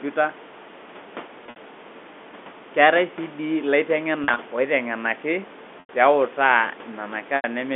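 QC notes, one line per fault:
1.46–1.56 s, 4.24–4.38 s, 5.80–5.89 s, 7.36–7.44 s: packet loss with pitch repetition. Each time about 80–90 ms of audio is missing. The receiver loops the last pitch period to fill the gap, which gives a brief buzzy, held tone. The first two gaps are broken up, spread over 100 ms and 140 ms.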